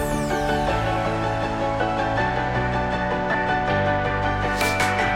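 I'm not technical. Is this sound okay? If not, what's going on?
No. Lost LE Audio frames cause a tiny glitch at 3.33 to 3.35 s. About 15 ms of the wireless audio never arrived, which fits two lost frames. The receiver filled the gap by reusing the last bit of sound with scrambled detail, so it briefly smears into a hiss.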